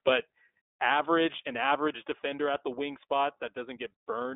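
From start to finish the speech passes through the iLBC codec. Nothing above 3.8 kHz survives, and 20 ms frames coded independently leave it clearly rough and synthetic.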